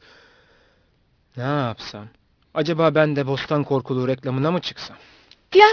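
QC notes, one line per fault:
Throughout, aliasing: the sample rate was lowered without an anti-alias filter first, consistent with a drop to 11 kHz. Energy above the 5.5 kHz fold reflects back as unrelated tones, roughly 20 dB below the speech, leaving sibilants gritty and metallic right up to the band edge.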